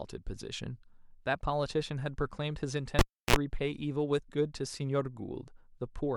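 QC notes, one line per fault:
2.99–3.36 s cable pulled and plugged in: a pop, about 320 ms of near silence, then a 56 ms burst of 60 Hz buzz and a second pop as the connector is reseated.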